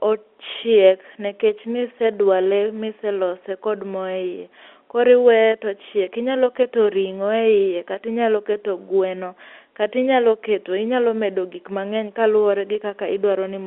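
No technical faults can be heard in the speech, which sits within the narrow band of an ordinary telephone line, about 250 Hz to 3.5 kHz, consistent with 64 kbps G.711 A-law telephone coding.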